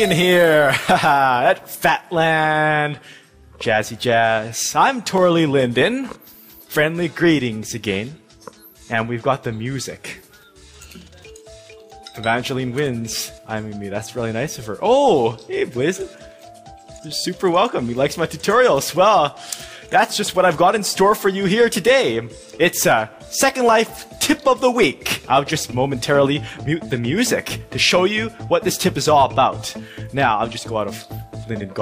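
Dropped samples at 5.18 s: a single sharp click where a tiny run of the audio, well under a millisecond, is missing, likely through samples lost in transfer. The waveform jumps straight to a later value, leaving no audible gap in the sound but a thin vertical line across the spectrum.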